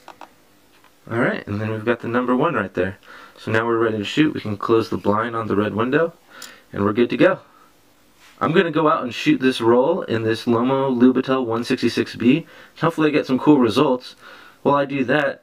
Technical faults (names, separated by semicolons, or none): channel delay (comb filtering)